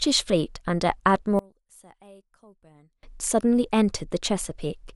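From 1.39 to 3.03 s, one channel was likely inverted: one stereo side carries the speech with its polarity flipped, so the two sides cancel wherever they match. Heard as mono, the centred voice drops by about 28 dB and nearly disappears. What remains is the small difference between the channels, a faint trace of the speech, until the full voice returns at 3.03 s.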